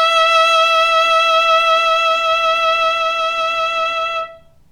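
No technical faults are audible.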